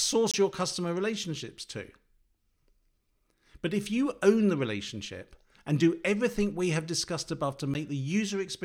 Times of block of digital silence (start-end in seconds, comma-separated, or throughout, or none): 0.31-0.34, 7.74